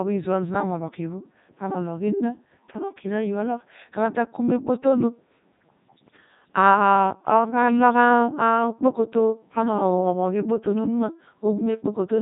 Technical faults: Codec 2 vocoder

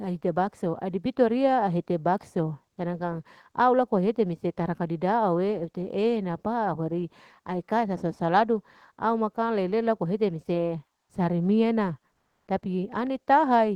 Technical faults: comfort noise in place of the background; onset clipped by the voice detector

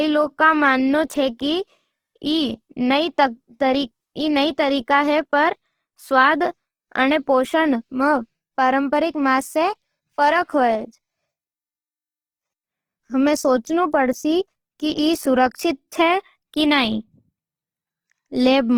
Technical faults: Opus compression

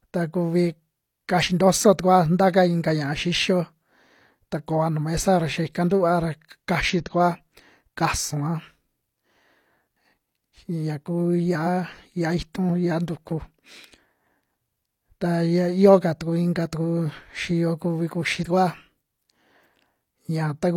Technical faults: damaged data in a compressed stream

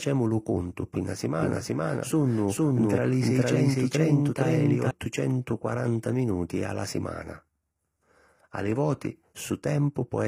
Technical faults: HE-AAC compression; doubled audio track

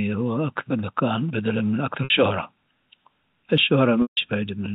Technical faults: GSM signalling bursts; packet loss with pitch repetition

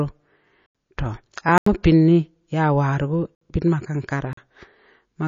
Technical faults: MP3 compression; block of digital silence

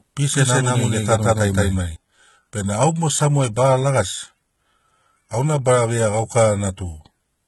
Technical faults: HE-AAC compression; doubled audio track

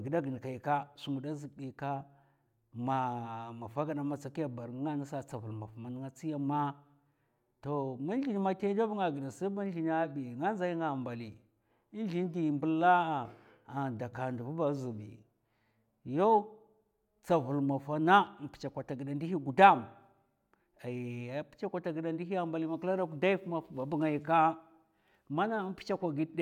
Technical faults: none

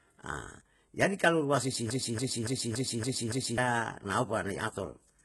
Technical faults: HE-AAC compression; broken-record loop

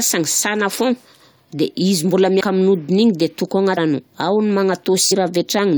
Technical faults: compressed frames skipped

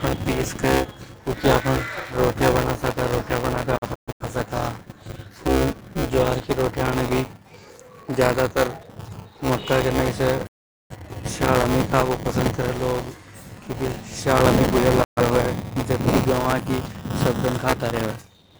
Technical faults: buffer tearing; digital broadcast dropout

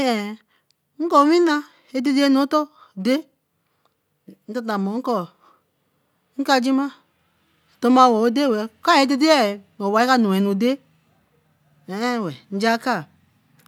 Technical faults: none

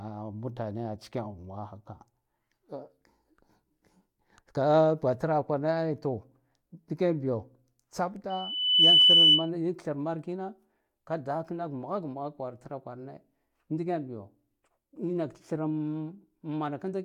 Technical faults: loudspeaker feedback squeal

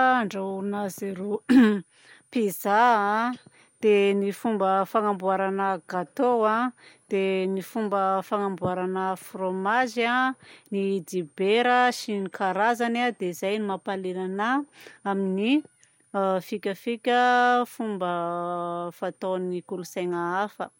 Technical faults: switching supply whistle

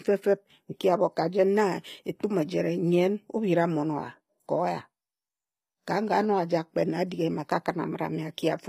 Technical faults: HE-AAC compression

